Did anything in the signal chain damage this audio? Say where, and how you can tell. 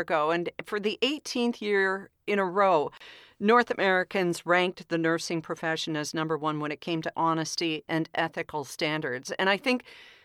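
Yes. The damage most likely happened on the wireless link to the playback device, as a Bluetooth dropout. At 2.97 to 3.01 s, just after "year in a row", the speech cuts to silence. It then resumes further along, as though it had kept playing through the gap. About 30 ms of audio is missing, which fits two lost packets that reached the headphones too late and were discarded.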